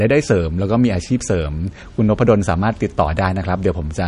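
Throughout the recording, the audio has most likely passed through MP3 compression at a low bitrate, which fits roughly 42 kbps. Starved of bits, the encoder chops off everything above 10.6 kHz, so the speech loses its air and the s sounds turn dull. Weaker frequency lines drop in and out from frame to frame, leaving a plainly audible watery, swirling texture, with a metallic chirp on sibilants and softened consonant attacks.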